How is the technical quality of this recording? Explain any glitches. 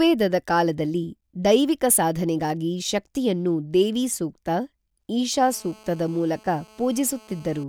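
One glitch affects the recording near the end. From 5.33 to 7.64 s a GSM phone buzz sits under the speech: a steady, raspy 217 Hz rasp about 28 dB below the signal, caused by the audio circuit rectifying a nearby phone's transmission bursts during a call. Its harsh harmonics and 217 Hz rate set it apart from 50 or 60 Hz mains hum.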